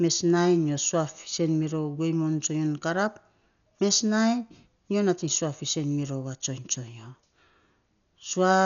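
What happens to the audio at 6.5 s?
At 6.5 s the speech is dull and band-limited, with nothing above about 6.9 kHz, and the upper harmonics carry a rough, fluttering noise. This persists across the whole clip, not just at that moment. The likely cause is heavy Dolby Digital compression at a low rate, consistent with roughly 48 kbps. The encoder narrowed the band and left many frequency lines without mantissa bits, and the decoder filled them with dither noise.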